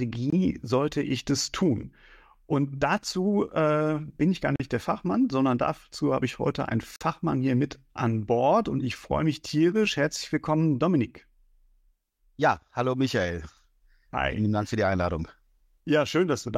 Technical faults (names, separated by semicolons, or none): block of digital silence